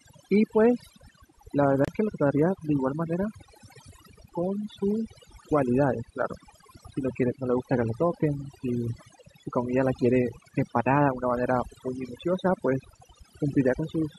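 Throughout, the background sinks to near silence dotted with twinkling specks: overdone noise removal, with bands near the noise floor suppressed too hard.

From 1.85 to 1.90 s the sound cuts out, then resumes further on, about 30 ms having gone missing, likely a Bluetooth dropout fitting two lost frames.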